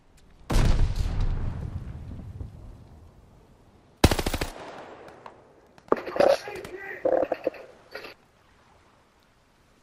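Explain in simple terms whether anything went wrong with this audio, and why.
Nothing went wrong here: no dropouts, clicks, distortion or other playback or recording faults turn up anywhere in the clip.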